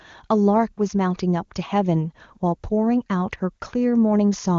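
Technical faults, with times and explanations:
No technical faults; the speech runs through AMR wideband (HD Voice) coding at 23.85 kbit/s, where codec damage is at most faint.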